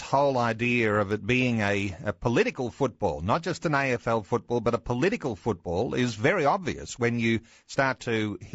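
From start to finish the speech sounds rough and grainy, with noise filling the gaps between pitch harmonics, most likely from low-delay AAC compression at a rate near 32 kbps. On a spectrogram the harmonic stripes look smeared and speckled, and the top band looks thin or synthetic.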